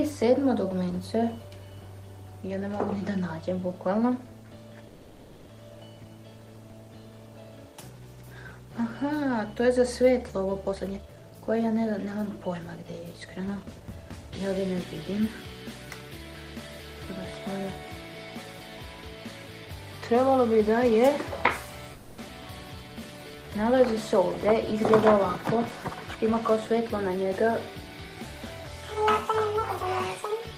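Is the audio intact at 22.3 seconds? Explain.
No, a skip ahead occurs at 22.28 to 22.31 s: roughly 150 ms of audio was dropped in transit or by an overflowing jitter buffer, so playback jumps forward with only a tiny gap.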